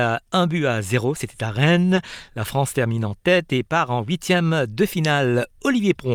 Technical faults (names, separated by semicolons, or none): short concealed packet loss